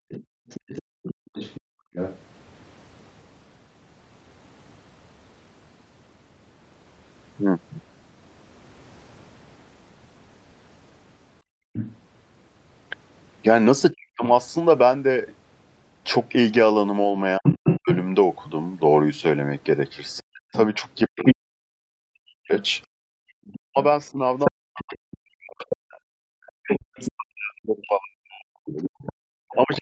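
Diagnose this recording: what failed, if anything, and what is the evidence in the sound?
The stage is call processing, specifically the echo canceller, and the background gated by the echo canceller is the clearest fault. The room sound collapses from 0.00 to 1.93 s, about 40 dB down at its deepest, for roughly a second in all. It dips again from 11.42 to 11.73 s, about 39 dB, and from 22.87 to 23.36 s, about 40 dB, for about half a second. The canceller clamped the microphone while the loudspeaker played, then released it.

A second voice also comes through, which points to the other side's voice leaking through. It runs from 0.09 to 2.19 s at around 15 dB below the talker, and from 11.73 to 11.98 s at around 10 dB below. From 17.44 to 29.78 s it sits at about the talker's own level. The likely cause is loudspeaker output reaching the microphone and the canceller failing to subtract it. 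The leak is band-limited like the rest of the call, with nothing above 8 kHz.

The talker's own speech collapses when both sides are active, which marks speech suppressed in double talk. At 13.92 to 14.23 s it drops by around 40 dB for a fraction of a second. From 17.39 s to the end it is cut down, also by around 40 dB, while the other voice plays over it. Unable to separate near speech from echo, the canceller likely attenuated everything.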